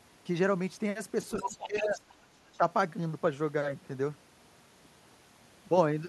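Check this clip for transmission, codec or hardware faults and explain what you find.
There are two echo-canceller faults here, both in the first half of this speech clip, and they overlap.

Between 1.38 and 2.01 s you can hear the other side's voice leaking through, sitting only a little below the talker's level. It's likely loudspeaker playback that the echo canceller didn't fully remove from the mic, so a second voice bleeds into the line.

Speech is suppressed in double talk at the same time, from 1.42 to 2.0 s, with the talker dipping by around 10 dB over a bit under half a second. A brief, shallower dip of around 5 dB follows at 2.58 to 2.64 s. With both sides active, the canceller has likely turned the near talker down along with the echo.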